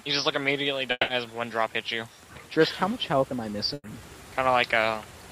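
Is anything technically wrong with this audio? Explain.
Yes, there are several transport problems here. From 0.91 to 1.11 s there's what sounds like a long network dropout, likely caused by audio not arriving in time. The receiver stretches the last sound into a fading fill for about 170 ms, roughly 20 ms goes silent, and about 120 ms of the original never plays. When it resumes it has jumped ahead, and the timing has shifted by something like 50 ms.

The jitter buffer speed-up shows up twice, from 1.63 to 2.08 s and again from 4.94 to 5.23 s. In both spots the buffer had built up more audio than it wanted, so the receiver trimmed out tiny pitch-period slices one after another to catch up, roughly 50 ms each time. The pitch stays put but the pace jumps, about 108 percent in the first stretch and a more rushed 115 percent in the second.

Between 3.74 and 4.02 s there's a burst of packet loss. 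About 60 ms of audio is gone. The receiver covers it by repeating the last sound and letting it fade over about 100 ms, then there's about 20 ms of silence. When the audio picks up again it's further along, with a delay shift of 40 ms and about 13 ms of extra material added at the join, so you get a brief held, decaying smear before the sound snaps back.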